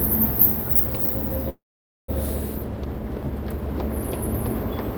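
At 1.49 s, delayed packets likely drained the jitter buffer. This call audio freeze inserts a mostly silent 0.59 s gap, then the sound resumes intact.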